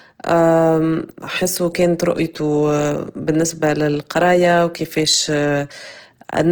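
Throughout the speech, the audio has a grainy, rough texture, with tonal parts of the sound turned noisy. This is likely Opus compression in its CELT music mode, consistent with a low rate near 16 kbps, filling starved bands with folded or noise content. Bandwidth stays full, reaching about 20.2 kHz.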